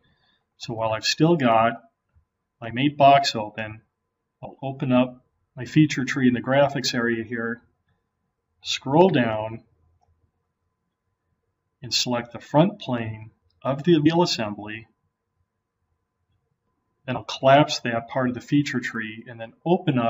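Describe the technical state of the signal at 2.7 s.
Compressed frames were skipped at 2.70 s because they were missing or rejected as damaged, so about 20 ms of audio vanishes and the sound jumps ahead at that point.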